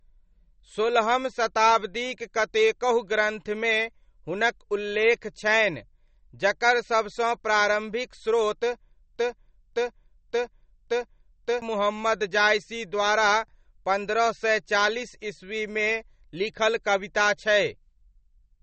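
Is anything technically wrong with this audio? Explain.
Yes, there are two faults.

MP3 compression runs through the whole clip and is plainly audible. Nothing is left above about 8.4 kHz, which points to a low-bitrate setting around 32 kbps. At that rate the encoder likely runs short of bits, so it removes the treble and drops weaker frequency components that flicker in and out between frames. This makes the speech sound watery and swirly, with metallic chirps on s sounds and smeared attacks.

A broken-record loop occurs from 9.16 to 11.62 s. A fragment about 0.57 s long plays four times back to back with no change, likely because the player or stream stalled and kept resending the last piece of audio it held. The speech that should have filled those seconds is missing, so the loop ends with a jump forward in the material.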